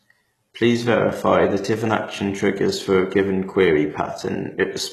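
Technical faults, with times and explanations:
Throughout, HE-AAC compression: the speech has that replicated, metallic treble, with s sounds going gritty and lispy and nothing above 12.3 kHz, likely from HE-AAC rebuilding the top end from copied lower bands, which fits a very low bitrate around 16 kbps.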